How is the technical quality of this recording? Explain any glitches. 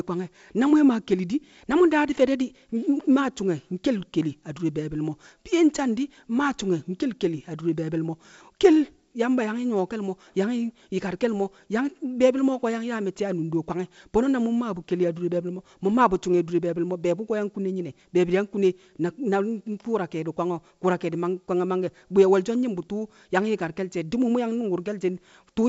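Nothing stood out on listening to this speech recording, which comes through the G.722 wideband telephone path at 64 kbit/s with no glitches to explain.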